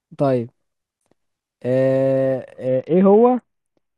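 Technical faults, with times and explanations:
2.68 to 3.97 s, Bluetooth SBC bit pool drop: the speech turns duller and grittier and stays that way to the end of the clip. The link appears to have throttled the SBC encoder from a normal bit pool of around 28 down to about 7, which fits a stream near 66 kbps. With so few bits the upper sub-bands get little or nothing, removing the treble, while the remaining bands are quantised coarsely, producing the rough, grainy noise.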